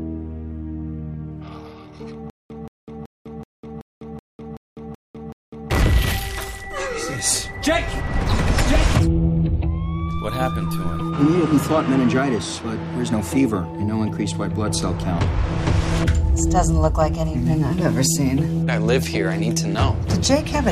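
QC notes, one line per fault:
2.30 to 5.70 s, stutter with silent gaps: a 177 ms burst repeats nine times, each followed by 201 ms of digital silence, so it returns every 378 ms. A stalled stream replaying its last fragment is the likely cause. The intended audio there is lost.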